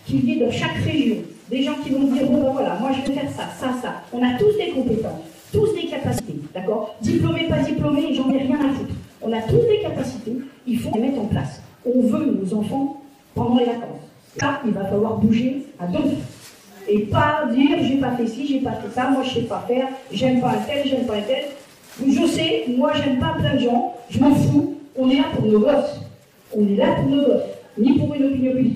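Damaged data in a compressed stream shows up as five short bursts at 3.05–3.09 s, 6.15–6.20 s, 8.29–8.31 s, 10.91–10.95 s and 14.38–14.43 s, each a brief chirp or blip of a few tens of milliseconds in the sound. At each point some bytes of the encoded file arrived wrong, so the decoder misread those frames, lost its place and had to hunt for the next valid frame header before clean audio resumed.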